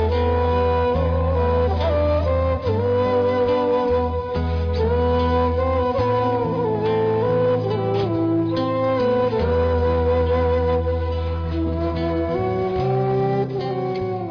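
No technical faults can be heard anywhere in this recording.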